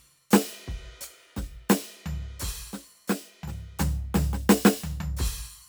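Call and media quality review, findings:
No audible faults found in the music clip; no dropouts, level anomalies or timing irregularities to attribute to any component.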